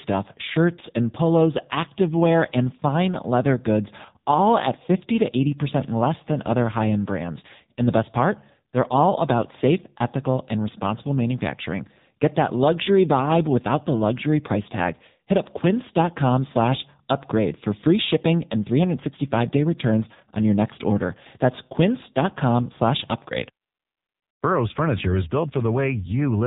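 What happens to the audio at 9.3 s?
At 9.3 s you're hearing the AMR narrowband mobile codec that runs the whole clip: nothing above 3.8 kHz, and heavy buzzy, synthetic coding, which fits a bitrate around 6.7 kbps.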